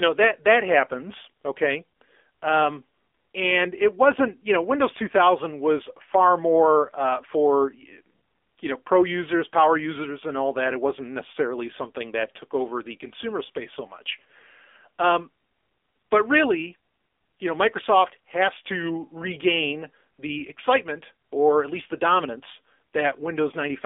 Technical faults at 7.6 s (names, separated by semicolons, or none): AMR narrowband mobile codec